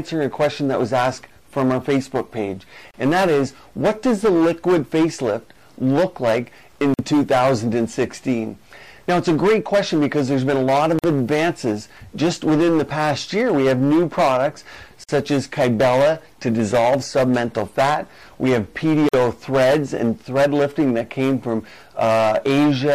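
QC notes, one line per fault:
2.91, 6.94, 10.99, 15.04, 19.09 s: gap at a join of encoded pieces, repeating every 4 s, 30 ms at the first and 49 ms at the rest. Untrimmed encoder start delay and last-frame padding leave a hole before the sound resumes where it stopped.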